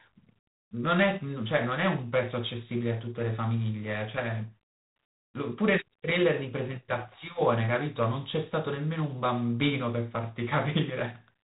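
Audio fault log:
Throughout, G.726 ADPCM: the speech carries a harsh, rasping hiss that rises and falls with its level, and nothing passes above 3.8 kHz. Each sample codes only a few bits of difference from an adaptive prediction, which fits 24 kbit/s, so coarse quantisation noise tracks the signal.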